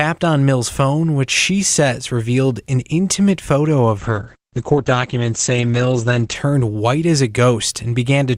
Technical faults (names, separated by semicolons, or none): call bitrate drop